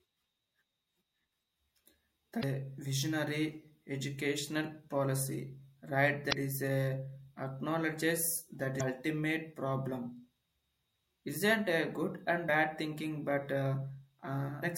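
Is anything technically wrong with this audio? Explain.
Yes. Damaged data in a compressed stream breaks up the speech five times, at 2.39 to 2.44 s, 6.29 to 6.33 s, 8.77 to 8.81 s, 12.45 to 12.49 s and 14.59 to 14.64 s. At each spot, corrupted bytes leave the decoder with frames it cannot read properly. It loses frame sync and hunts for the next valid header. Each event lasts roughly 40 to 50 ms and sounds like a brief chirp, squawk, click or short hole cutting into the speech.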